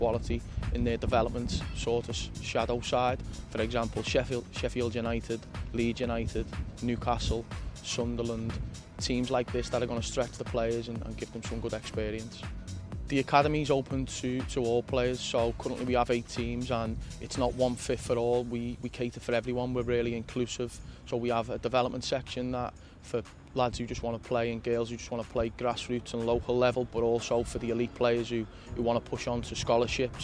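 No fault can be heard anywhere in the recording.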